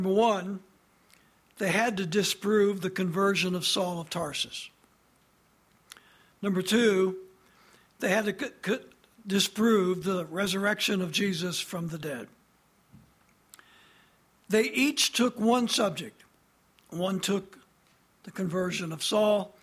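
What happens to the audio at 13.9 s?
Nothing goes wrong at 13.9 s; the audio plays through that moment intact, with no dropout, click, distortion or other fault.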